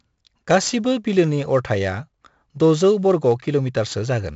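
From start to finish the speech carries 4-bit ADPCM compression, and the damage is heavy. Each sample is coded as a coarse 4-bit step from a predicted value, so the error rides along with the signal: a gritty hiss swells on every loud syllable and sharp onsets crunch where the step size lags. Nothing remains above 7.7 kHz, which fits roughly 64 kbps at a 16 kHz rate. A spectrogram shows a hard ceiling and noise filling gaps between harmonics during loud passages.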